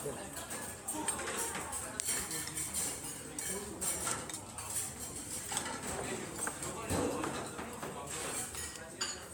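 Throughout the clip, the audio has likely been decoded and re-encoded with a lossy MP3 codec several times, roughly four passes, in a way that fits a 96 kbit/s setting. Each pass re-quantised the sound on a shifted frame grid, so the errors stacked up. The result is generation loss: a swirly, hollow texture with smeared transients and blurred attacks, worse than a single encode at that rate would give, with content stopping at 20 kHz.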